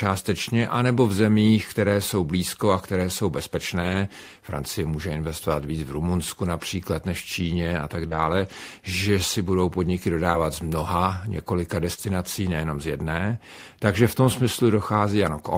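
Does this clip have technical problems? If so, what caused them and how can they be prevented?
Yes. Around 3.81 to 3.95 s there's a lost packet rebuilt from error correction. A few packets went missing, and the decoder filled about 80 ms from the low-bitrate backup copies, so the speech turns briefly rougher and noisier without any gap. Fixing the packet loss on the network path prevents it.

From 8.07 to 12.00 s there are scattered short gaps, roughly three of them, the longest around 40 ms. The receiver covered each hole by stretching the preceding sound, which leaves small ticks and hiccups. A steadier connection or a larger jitter buffer would prevent them.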